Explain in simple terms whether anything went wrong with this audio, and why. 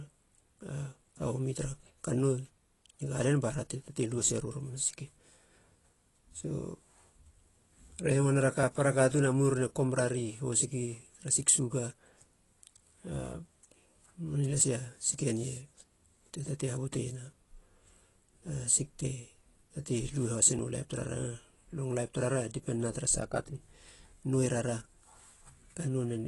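The speech sounds dull and fizzy throughout, with nothing above about 11.5 kHz. That is AAC compression, likely from a low-quality setting, rather than a bad microphone.

Tiny skips at 8.63, 14.61 and 20.59 s, evenly six seconds apart, are audio missing between chunks. About a fiftieth of a second is likely lost and joined without silence, unlike a dropout.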